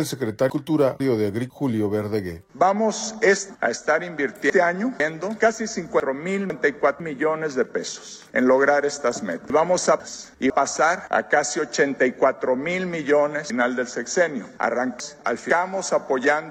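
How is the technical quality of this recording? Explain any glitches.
The recording has five jumbled moments where the sound briefly scrambles, at 0.5 to 1.5 s, 3.5 to 5.0 s, 6.0 to 7.0 s, 9.5 to 10.5 s and 13.5 to 15.5 s.

Each is a case of chunks out of order. The audio seems to move in half-second blocks (500 ms), and one block lands late and plays after the blocks that should follow it. At 0.5, 6.0 and 9.5 s it is one block late. At 3.5 s it is two blocks late, and at 13.5 s three. Nothing goes missing, but the sequence is shuffled, so the passage sounds garbled. Each misplaced block creates three hard joins where unrelated waveforms meet.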